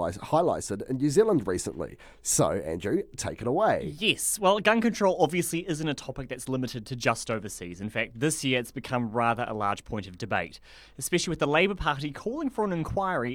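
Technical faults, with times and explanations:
No technical faults are audible anywhere in this speech recording.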